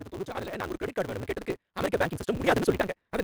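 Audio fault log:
throughout: block size mismatch (truncated), where block tails are discarded, giving a 188 Hz buzz and sound running 1.88 times fast at normal pitch; spectrograms show regular 188 Hz vertical striations.
0.16 to 2.93 s: automatic gain rising, where gain climbs about 11 dB, lifting speech and background together; the waveform envelope and noise floor widen steadily across this span.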